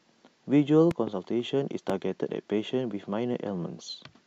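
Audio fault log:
0.91–1.10 s and 1.90–1.92 s: loud pop, a double then a single, about 10 dB above the speech, likely from voltage spikes. These show as tall waveform spikes and full-height vertical spectrogram lines.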